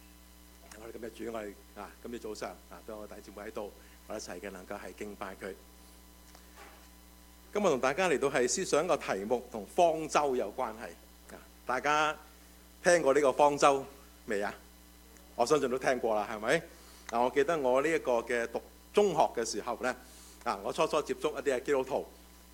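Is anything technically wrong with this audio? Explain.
No, nothing is technically wrong with this audio.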